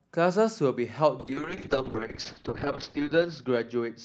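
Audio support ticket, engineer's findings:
Speech goes rough, watery or muffled from 1.20 s to end, top end gone. Call bitrate drop: bandwidth estimate fell, Opus encoder forced from 64 to 7 kbps. Coarse coding and narrowed audio band, floor held 1.17 s, no recovery.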